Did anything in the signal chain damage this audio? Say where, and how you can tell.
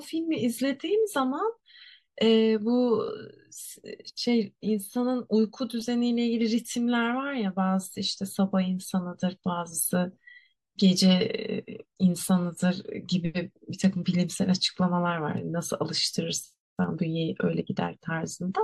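No, no signal-chain damage heard.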